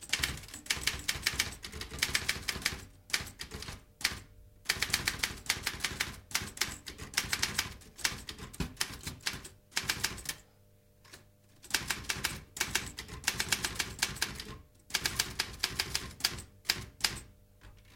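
A steady low drone at 50 Hz runs under these sounds from start to finish, sitting roughly 30 dB below them. This mains hum comes from the power line leaking into the signal path, typically through a ground loop between connected equipment or from a transformer close to the cabling, which imposes the 50 Hz supply frequency onto the recording as a constant tone.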